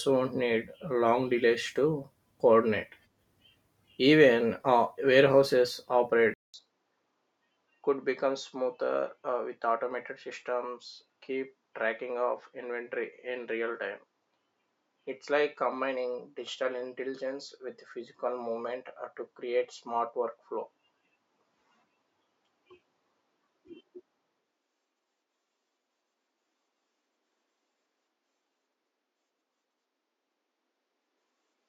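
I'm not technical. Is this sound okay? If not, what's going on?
No. Right after "uh warehouses", at about 6.34 s, the sound drops out for a fifth of a second, then returns duller and a little quieter until the end. That's likely an input switched to a poorer device, another microphone or a headset that misses the crisp top end.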